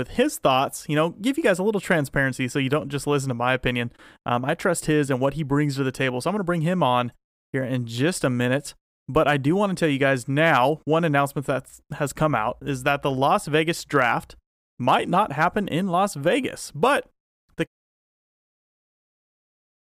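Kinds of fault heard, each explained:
No faults detected in this speech clip; the level tapers off in a smooth fade-out from around 17.5 s to 17.68 s, with no click or hard edge.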